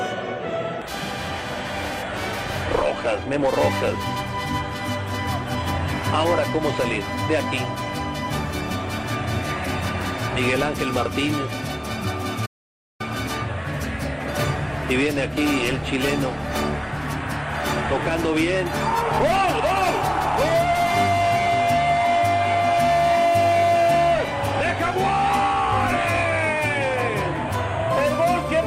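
At 12.45 s the audio just stops dead and stays silent until 13.01 s, a gap of a bit over half a second, before it picks up again. That's a playback stall. The player most likely ran dry of data or had its thread held up, so nothing reached the output until it recovered. To the ear it's an abrupt hole cut into the flow of the sound rather than a fade or a click.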